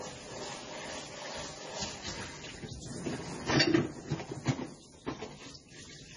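An everyday sound recording. Nothing is present above 10.4 kHz throughout. This is likely low-bitrate audio saved at a high bitrate, consistent with roughly 24 kbit/s MP3 later re-encoded at 320 kbit/s.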